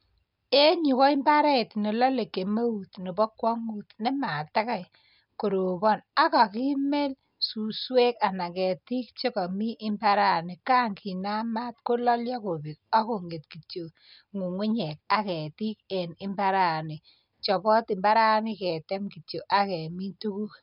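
No technical faults can be heard anywhere in the recording, which stays continuous throughout.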